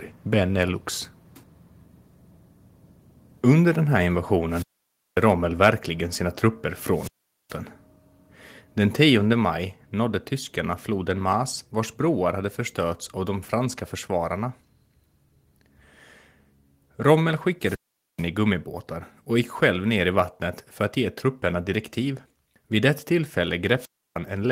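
At 4.17 s, just after "den här", the speech and its background drop suddenly by about 2 dB. This is likely a microphone volume stepped down, with the call software cutting the input level in one step. It happens again at 9.33 s, by about 3 dB, just before "maj nådde tyskarna floden".

From 4.49 to 5.22 s, hiss swells and the sound falls into a hole of near silence lasting about 0.55 s before speech returns. This is a wireless microphone squelch dropout: the FM signal faded until the receiver muted itself.

At 5.65 s, a harsh, crackly edge marks one loud peak, likely microphone overload. The input ran about 2 dB past the converter's ceiling and flattened the tops of a small fraction of samples.

Further squelch dropouts follow the same pattern. One runs from 6.93 to 7.57 s, just after "sina trupper", with about 0.42 s muted. Another runs from 17.60 to 18.26 s, with about 0.44 s muted. The last runs from 23.77 to 24.18 s, with about 0.31 s muted.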